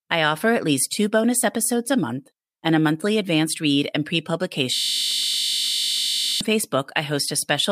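Speech, with a system hang loop from 4.75 to 6.41 s, just after "advanced read and pre". A single 20 ms slice repeats about eighty times, producing a steady 50 Hz buzz. This fits a 20 ms ring buffer replayed while the system froze.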